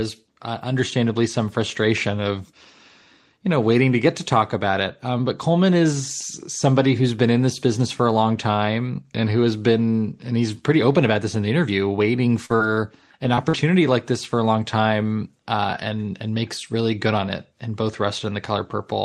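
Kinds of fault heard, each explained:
Short concealed packet loss: four brief speech dropouts, about 40 ms at 12.45, 12.56 and 13.49 s and 20 ms at 13.35 s, were filled by extending the preceding sound. Each is a short smear. The waveform shows no hard gap.
Lost packet rebuilt from error correction: the last 20 ms of each of those four losses was decoded from a low-bitrate copy carried in the following packet. The audio continues without a gap but turns briefly rougher, and a spectrogram shows grainier, noisier texture there.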